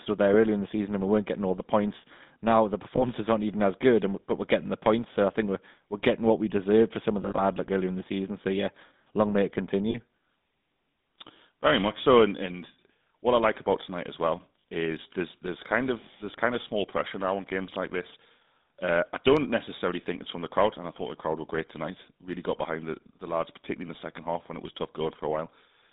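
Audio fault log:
throughout GSM full-rate codec: Audio is confined to about 200 Hz to 3.7 kHz. Coarse pulse excitation gives a buzzy, gravelly roughness, which fits 13 kbps coding.
2.96–3.03, 7.22–7.43, 9.90–9.96, 14.60–14.64 lost GSM frames: Brief metallic rings hold the last sound. One is before "aren't even as good", another after "yeah long may it".
22.33 dropped buffer (overrun): A small jump between "crowd were great tonight" and "got behind the the". About 10 ms is skipped, likely from an unread buffer.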